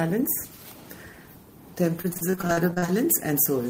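From 2.01 to 2.90 s the audio breaks up with repeated packet loss, giving a robotic sound: twelve short dropouts, none longer than 40 ms, each patched by stretching the last bit of sound. About a third of that stretch is concealed, so it turns choppy.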